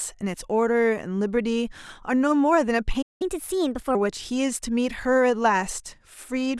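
At 3.02 s the speech just drops out, a playback stall. The output goes dead silent for about 183 ms, running to 3.22 s, then the talking resumes. It's a clean hole in mid-flow. The likely cause is the player running dry on buffered data, or its audio thread getting blocked long enough that nothing was fed to the output.

Straight after that, from 3.22 to 3.95 s, you get the catch-up at higher speed. The player resamples its backlog to play it 1.25 times faster, so the voice rushes and jumps up by roughly four semitones, giving it a chipmunky, hurried sound. Once the lost time is recovered, at 3.95 s, speed and pitch snap back to normal.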